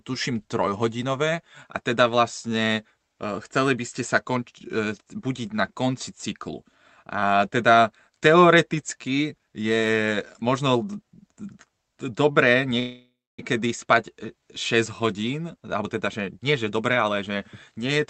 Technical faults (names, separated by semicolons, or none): call audio freeze; jitter buffer speed-up